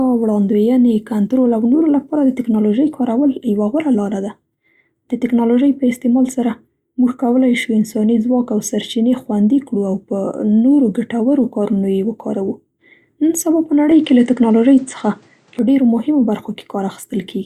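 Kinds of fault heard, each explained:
Input switched to a poorer device: from 13.91 s to 15.59 s the speech loses its top end, with nothing above about 9.3 kHz, and turns duller. The level shifts by roughly 5 dB and a faint new background noise appears well beneath the speech. There is no gap at either change. This is likely the recording input moving to a narrower-band microphone with its own gain and noise, and then switching back.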